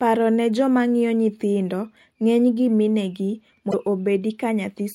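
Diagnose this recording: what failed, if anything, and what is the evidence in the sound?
Damaged data in a compressed stream, from 3.70 to 3.74 s, interrupts the speech with a short glitch of about 40 ms that does not belong to the surrounding audio. The failure sits at the codec stage, in the stored or transmitted bitstream. Corrupted bytes reach the decoder, which turns them into garbage or discards the affected frames. It then loses frame alignment and must find the next valid header before normal decoding resumes.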